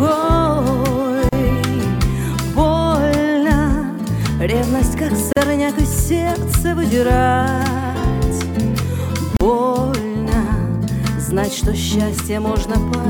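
Gaps at a join of encoded pieces appear at 1.29 s, 5.33 s and 9.37 s, recurring every 4.0 s and lasting about 36 ms, 40 ms and 40 ms. At each point the sound drops out, leaving a short hole with smeared edges, then resumes exactly where it left off. The regular spacing fits 4-second pieces encoded separately and joined untrimmed, so each encoder's start-up delay and last-frame padding stayed in as silence.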